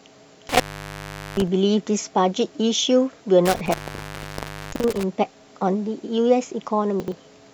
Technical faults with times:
0.49-1.47 intermittent contact
3.45-5.03 intermittent contact
4.72-4.80 chunks out of order
7.00-7.12 chunks out of order

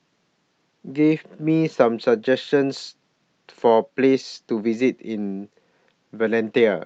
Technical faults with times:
none

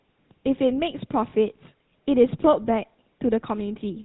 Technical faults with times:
0.00-4.04 GSM full-rate codec
1.30-1.33 lost GSM frames

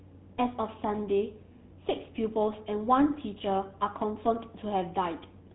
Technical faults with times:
0.00-5.54 GSM full-rate codec

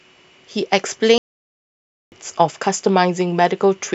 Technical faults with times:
1.18-2.12 playback stall

